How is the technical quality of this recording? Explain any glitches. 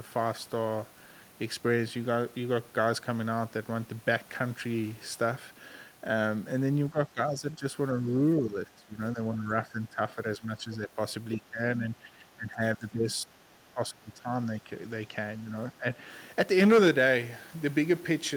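The recording is degraded by repeated speech suppression in double talk from about 7 s onward.

At 6.92–7.64, 7.99–8.07, 8.4–10.98, 11.41–13.29, 13.71–14.28, 14.52–14.72, 15.39–15.52 and 15.72–15.87 s the speech dips by roughly 5 to 20 dB, deepest near 13.7 s. This is likely an echo canceller muting the talker while both sides speak.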